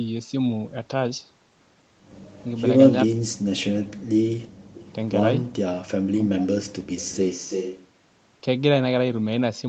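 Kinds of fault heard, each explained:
Speech suppressed in double talk: The voice drops sharply, by roughly 40 dB at its deepest, at 3.08 to 3.28 s, 3.68 to 3.99 s and 6.07 to 6.56 s. Each dropout lasts between a fifth and half a second. The likely cause is an echo canceller that could not separate the local talker from loudspeaker echo while both sides spoke, so it turned everything down, including the near-end speech.
Background gated by the echo canceller: From 4.48 to 4.75 s the room sound falls away by about 31 dB for roughly a third of a second, then comes back. The canceller is clamping the microphone hard while the far end plays through the loudspeaker, treating the whole input as echo.
Echo leak: A delayed copy of the voice arrives 332 ms behind the original. It is heard briefly at 4.75 to 4.83 s, roughly 20 dB below the direct speech, and again from 7.02 to 7.87 s, where it is much stronger at only a few dB down. 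This is likely a loudspeaker on one end whose echo canceller left part of the microphone pickup unremoved and sent it back.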